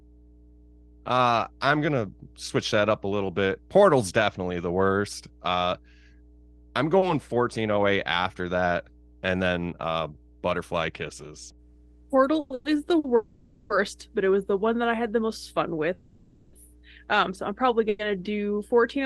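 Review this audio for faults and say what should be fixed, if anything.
Mains hum runs through the whole clip. It is a steady 60 Hz tone, roughly 25 dB below the speech. A ground loop or nearby transformer is feeding the power line into the signal. Break the ground loop or move the cabling away from transformers.

Call audio freezes occur at 12.40 to 12.52 s and 12.54 to 12.67 s, just before "is the". They recur at 13.16 to 13.72 s, 15.94 to 16.55 s and 17.89 to 18.01 s. The sound hangs as a fading buzz for 0.1 to 0.6 s, then resumes where it stopped. Nothing is lost, but gaps are inserted. The likely cause is packets held up in transit, draining the jitter buffer. Stabilise the network path or enlarge the jitter buffer.

A short stall from a late packet occurs at 12.99 to 13.06 s, right after "is the". The last sound is stretched for about 50 ms with a slight buzz, then playback continues with nothing lost. 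One packet missed its slot. Reducing network jitter would prevent it.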